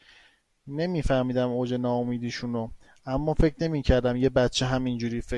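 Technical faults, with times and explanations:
The speech signal has no audible technical faults.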